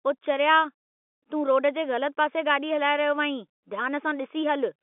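No technical faults are audible.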